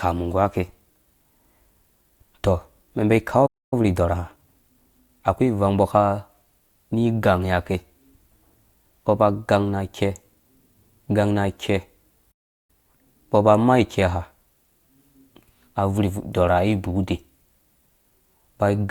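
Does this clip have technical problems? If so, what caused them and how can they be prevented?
Yes. At 3.46 s and again at 12.31 s the speech cuts out mid-flow into silence for about 0.26 s and 0.37 s. This is a playback stall, likely the player running dry of buffered data or its audio thread being blocked. A larger playback buffer and a higher-priority audio thread would prevent it.

Right after each gap the speech turns hurried but keeps its normal pitch: 1.15 times speed from 3.73 to 5.43 s, starting on "ivang mbɔ", and double speed from 12.70 to 13.06 s, starting on "mbɔ ba maa". This is time-compressed catch-up, where the player trims small slices and cross-fades them to clear its backlog. Gentler catch-up limits, or resuming without compression, would prevent it.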